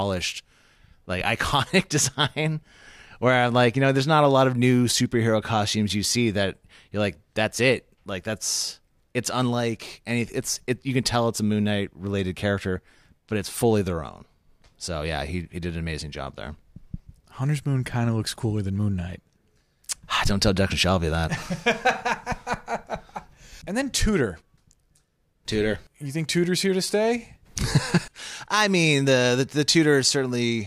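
Speech, with one channel dropping out from 25.76 to 25.86 s. For about a tenth of a second the level falls abruptly by about 6 dB, then returns just as suddenly. A loss of one stereo channel before the mono sum is the likely cause. Unlike a full dropout, the sound never goes silent, and unlike a gain dip or fade, the step is a clean halving with hard edges at both ends.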